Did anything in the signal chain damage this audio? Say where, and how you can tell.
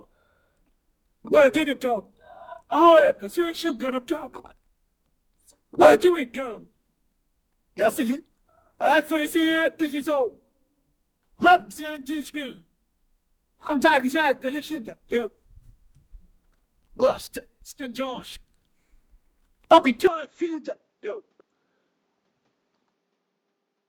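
Yes. At 20.07 s the sound abruptly turns duller and boxier and stays that way to the end, a few decibels quieter, with no gap at the change. The likely cause is the input switching to a poorer device mid-recording. On a spectrogram, energy above 7.6 kHz vanishes at that instant, leaving a flat ceiling, and a new faint noise floor appears well below the signal. The waveform shows a slight step down in level.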